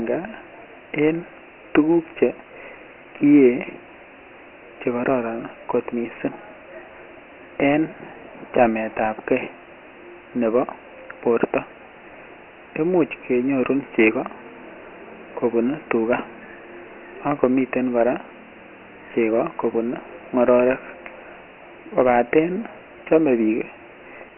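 From start to finish the speech carries Dialogic VOX ADPCM damage, the old OKI-style 4-bit coding used in phone menus and voicemail. Nothing survives above 2.9 kHz, which fits a 6 kHz sample rate at 4 bits per sample, and the lows thin out below about 300 Hz. Since ADPCM only codes the step from one sample to the next, coarse steps leave a heavy, gritty hiss trailing the speech.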